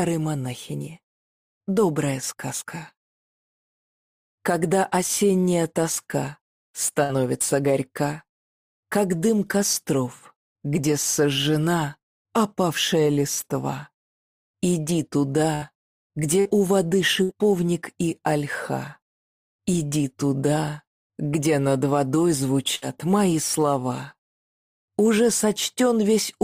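Sample clock jitter runs throughout: a timing wobble of a few microseconds adds roughness roughly 25 dB below the signal, strongest on loud, bright passages. A burst of packet loss strikes at 7.03, 15.55, 16.40, 17.23 and 22.75 s, each a 50–70 ms fading concealment fill before playback resumes with about 60 ms of audio skipped.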